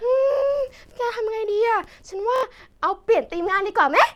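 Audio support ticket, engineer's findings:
Bluetooth stutter, 2.36 to 2.43 s, speech. Buzzy machine-gun repeat of one short slice for about 70 ms, which fits roughly three lost packets at the receiver. Unlike a dropout, it repeats sound instead of going silent, and it resumes later, skipping ahead.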